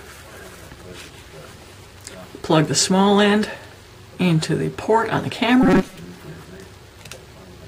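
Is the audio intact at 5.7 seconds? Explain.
No. From 5.63 to 6.02 s there is robotic sound from repeated short buffers, likely from audio arriving too seldom so that a roughly 5 ms chunk is replayed, covering about half the span. This forces a rigid 188 Hz metallic buzz, visible on a spectrogram as evenly spaced harmonic stripes and in the waveform as identical repeating cycles.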